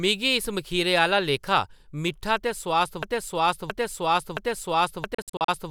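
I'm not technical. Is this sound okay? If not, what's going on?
No. A broken-record loop starts at 3.03 s and runs to the end: the same 0.67 s of speech repeats four times, likely because playback stalled and kept resending its last piece. A Bluetooth dropout follows from 5.14 to 5.48 s, with short bursts of silence up to 56 ms long, likely from wireless packets arriving too late.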